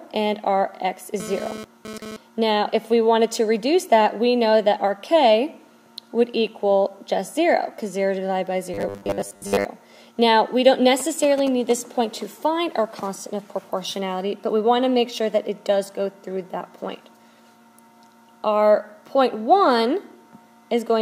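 From 1.2 to 2.17 s a GSM phone buzz sits on top of the audio. It is a hard, raspy tone at 217 Hz, about 13 dB below the signal, that cuts in and out because a nearby 2G phone is moving data. Its radio pulses, sent 217 times a second, are rectified by the audio circuitry. On a spectrogram it appears as a stack of evenly spaced horizontal lines at 217 Hz and its many harmonics, broken into patches. The waveform shows a regular comb of sharp pulses. From 8.74 to 9.65 s the sound becomes rigid and metallic, with a fixed 100 Hz buzz that only loosely tracks the original. This is robotic sound from repeated short buffers, likely caused by audio arriving too seldom so that the last chunk of roughly 10 ms is replayed over and over while most of the real audio is skipped. A spectrogram shows harmonics locked at multiples of 100 Hz, and the waveform shows identical short segments repeating. From 11.0 to 11.72 s come GSM signalling bursts, a galloping dit-dit-dit of brief 217 Hz buzzes around 15 dB below the signal. 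They come from a phone exchanging short bursts with the network rather than transmitting continuously. On a spectrogram these are short vertical clusters carrying 217 Hz harmonic lines. The waveform shows grouped pulse trains separated by gaps.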